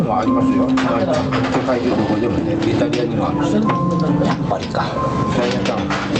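From the very start and running the whole way through, there's gain pumping, with the level swinging by around 10 dB. It sounds squashed, with loud and soft moments pushed close together. The likely cause is input gain set far too high, with a fast limiter or compressor clamping down on every peak. The call codec's top end stops around 8 kHz, which fits Opus at about 32 kbps.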